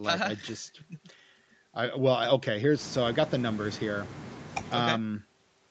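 Listening through the speech, nothing stood out as a fault; the call path limits the sound to 8 kHz, as that kind of call is set to do.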